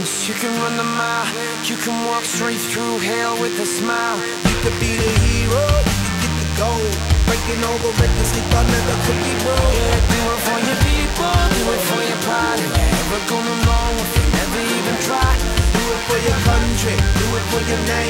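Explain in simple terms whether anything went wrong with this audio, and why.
Something did go wrong: a DECT cordless phone buzz runs through the whole clip. A nearby cordless phone or its base pulses a radio burst a hundred times a second, the audio circuitry picks that up, and you hear a steady, thin, fairly loud buzz sitting under the sound.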